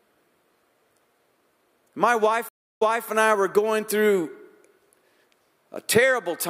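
At 2.49 s the connection drops and the player reconnects with a fresh decoder mid-stream, a stream reconnect. Speech stops for 0.33 s of silence, then resumes 0.26 s earlier than where it broke off, repeating a fragment before "and I were going", ending at 3.07 s.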